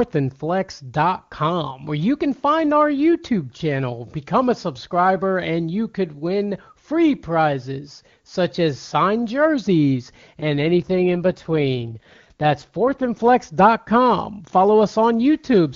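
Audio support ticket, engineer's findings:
AMR rate drop, 10.42–13.18 s, after "such as signed jerseys": speech turns rough and synthetic with full band and no gap, consistent with AMR-WB falling from 23.85 to 8.85 kbit/s.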